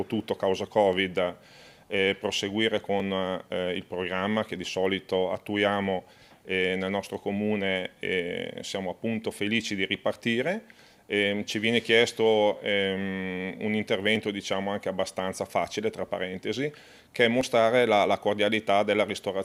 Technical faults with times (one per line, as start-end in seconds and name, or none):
0.93 dropped samples
3.00 dropped samples
14.16 dropped samples
17.41 dropped samples